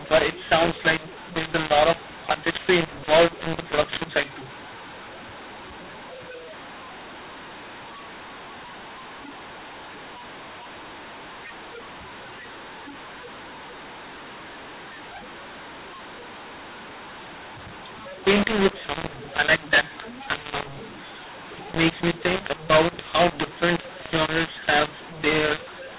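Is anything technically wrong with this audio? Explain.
Yes. Throughout the speech, a mu-law and A-law mix-up: samples coded with mu-law are decoded as A-law, scrambling levels into harsh distortion and noise-filled pauses, unlike ordinary G.711 hiss, which stays faint.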